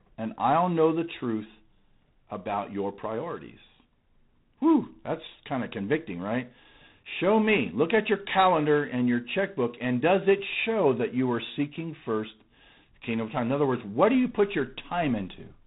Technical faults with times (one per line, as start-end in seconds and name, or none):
0.00-15.66 G.726 ADPCM